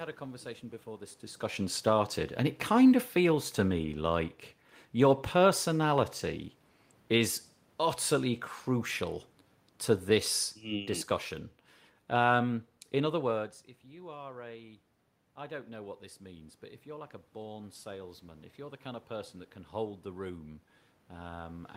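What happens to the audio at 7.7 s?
Nothing goes wrong at 7.7 s: the speech carries on cleanly through that moment, with no dropout, click or distortion.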